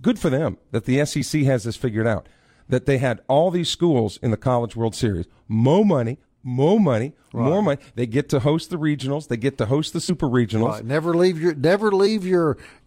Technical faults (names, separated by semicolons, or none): compressed frames skipped